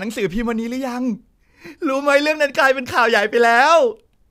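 Nothing stood out on listening to this recording.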